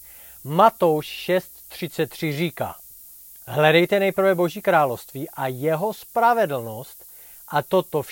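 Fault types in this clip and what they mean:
Low bit depth with noise shaping: The speech is quantised to 8 bits, and the rounding error is fed back so that it is pushed upward in frequency. The result is a constant thin hiss, roughly 20 dB below the speech, that grows sharply brighter toward the top of the band. On a spectrogram this shows as a haze whose floor rises steeply toward the highest frequencies. On the waveform it appears as fine grainy fuzz that persists even in pauses.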